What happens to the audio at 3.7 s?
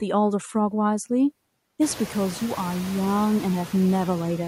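Noise suppressor artifacts, present throughout: the suppressor cuts noise-classed bands by about 18 dB frame by frame, so the louder room noise pumps between words.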